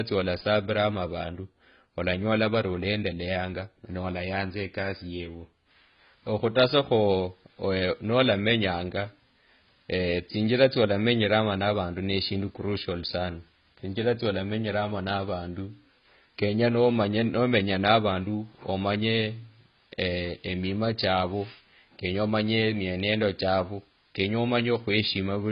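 From start to finish the speech sounds dull and smeared, with nothing at all above about 5.1 kHz, so the sibilants lose their edge and pick up a fizzy, warbly texture. That's heavy AAC compression damage, likely from AAC-LC run at a very low bitrate, something like 16 kbps. Starved of bits, the encoder cuts off the top of the spectrum and leaves holes elsewhere, and what it keeps it quantises so coarsely that sustained sounds shimmer.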